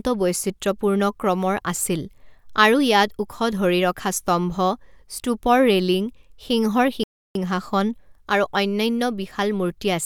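A playback stall interrupts this speech clip at 7.04 s, where the sound cuts to silence in mid-flow for about 317 ms before resuming at 7.35 s. The likely cause is the player running short of buffered data, or its output thread being blocked, until it recovered.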